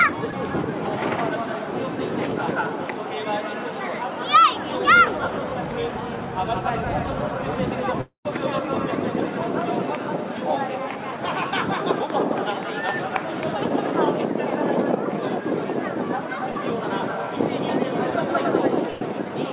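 Short concealed packet loss at 0.31 to 0.33 s: about 10 ms of audio failed to reach the decoder in time, and the receiver bridged it by extending the preceding sound for roughly 12 ms before blending back. It passes as a brief smear or wobble. The same fault returns at 16.52 to 16.56 s with a larger hole, about 30 ms filled, so the smear there is longer and a brief sound could be swallowed.

Long network dropout at 8.01 to 8.26 s: nearly a quarter of a second of audio is missing. The last sound carries on as a fading buzz or hiss, then collapses into roughly 120 ms of near silence before the audio picks up further along, with that stretch skipped. The likely cause is incoming packets stopping altogether for that interval.

Burst of packet loss at 18.91 to 19.02 s: about 100 ms of consecutive audio was lost or arrived too late to play. The receiver stretched the final sound across the entire gap and turned it down as it went, so it becomes a held, fading buzz or hiss with no silent interval. 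Playback then resumes past the missing section. The narrow, telephone-like band, with nothing above 4 kHz, comes from the call codec.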